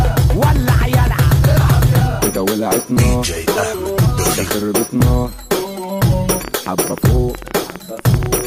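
A train of clicks runs from 6.41 to 8.42 s, about twenty similar pops at roughly 9.5 per second, unevenly spaced, likely interference or a faulty connection or power supply.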